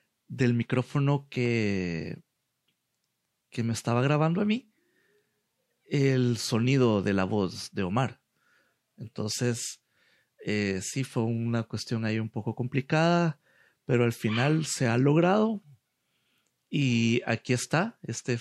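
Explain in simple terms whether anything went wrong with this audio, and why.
Four clicks between 0.95 and 1.46 s are CD scratch ticks. A disc scratch hits once per spin, and the player briefly patches over missing sound.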